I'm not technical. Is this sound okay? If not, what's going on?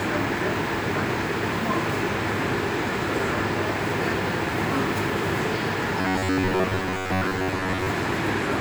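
No. From 6.0 to 7.9 s, audio likely arrived too slowly and tiny snippets were replayed instead. This robotic sound from repeated short buffers is a metallic buzz near 94 Hz.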